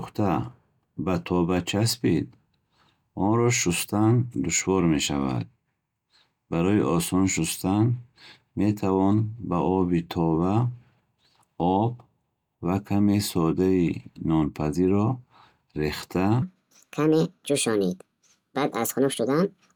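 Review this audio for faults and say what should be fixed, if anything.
From 16.42 s to the end at 19.75 s, the speech plays as a section at the wrong speed: about 1.51 times faster, with pitch raised roughly seven semitones, so the voice turns high and hurried. This is likely a segment resampled or played against the wrong clock rate. Prevent it by verifying that every edited or imported segment matches the project sample rate before rendering.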